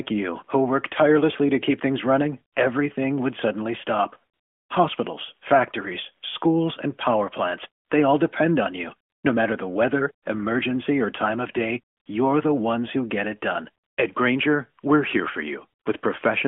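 AMR comfort noise appears at 4.34 to 4.70 s, after "everything would suddenly stop", then at 7.84 to 7.90 s, 9.10 to 9.24 s, 11.96 to 12.06 s between "or time of day" and "you're the ones who", 13.84 to 13.98 s after "who get it done", and 15.80 to 15.86 s. During these pauses of 60 to 360 ms the phone treated the talker as silent and stopped sending speech frames. The receiver filled each gap with synthetic noise built from a rough estimate of level and spectrum, so the real background switches to a smooth, steady hiss and back. The narrowband mobile band of roughly 200 Hz to 3.4 kHz is audible throughout, which fits AMR-NB at 12.2 kbps.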